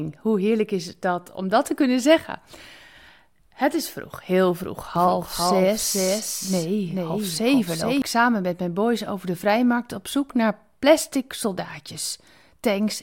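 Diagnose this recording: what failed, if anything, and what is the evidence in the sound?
From 4.96 s to 8.02 s, just after "is vroeg heel vroeg" and ending before "samen met mijn boys", the speech is heard twice: a full-band copy trails the original by around 400 ms, roughly 5 dB quieter, with no reverb or room colouring, and it cuts in and out abruptly. This is a doubled audio track, likely from the same signal being captured a second time through a slower path or an edit leaving two copies overlapped out of step.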